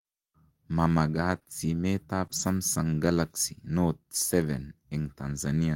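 Speech, and between about 1.31 and 2.41 s you get scattered short gaps: roughly three tiny dropouts, none much past 20 ms, about 60 ms lost in all. The receiver papered over them by stretching the preceding sound across about 140 ms, so you hear little ticks and smeary hiccups.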